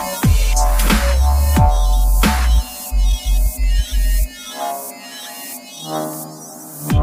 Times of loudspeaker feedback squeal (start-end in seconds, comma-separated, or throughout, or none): none